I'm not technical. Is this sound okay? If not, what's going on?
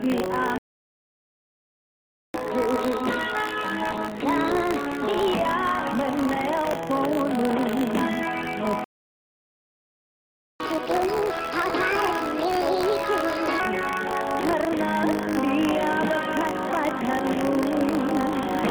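No. Buffer tearing runs through the whole clip: a steady robotic buzz at 50 Hz. The program feeding the sound card and the card reading it are out of step, so a small slice of each chunk replays sound from about 40 ms earlier, with a hard seam each time.

A playback stall silences the sound from 0.58 to 2.34 s and again from 8.84 to 10.6 s, about 1.76 s each. The player likely ran out of data to play, so the output went silent until more arrived.

Catch-up at higher speed follows each stall. From 2.34 to 5.34 s the sound plays 1.15 times faster and about two semitones higher. From 10.6 to 13.6 s it plays 1.5 times faster and about seven semitones higher. The player is rushing through its backlog to make up the lost time.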